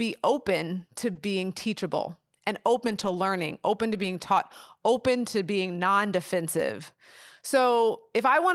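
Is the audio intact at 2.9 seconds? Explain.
No. From 2.87 to 3.09 s the speech passes through a lost packet rebuilt from error correction. Packets went missing, but each following packet held a low-bitrate backup copy. The decoder played those backups instead, so nothing drops out. About 120 ms of the speech comes from these copies, which fits roughly six lost packets. That stretch sounds rougher and noisier than the speech around it.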